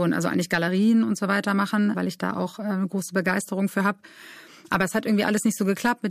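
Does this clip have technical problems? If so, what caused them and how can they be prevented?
No technical problems are audible.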